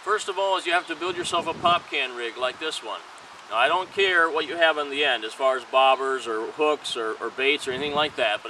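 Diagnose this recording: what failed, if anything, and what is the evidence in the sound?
Block of digital silence at 5.31 s: a driver or buffer underrun zeroed under a millisecond, fitting a 32-sample block, and its abrupt edges produce one tick.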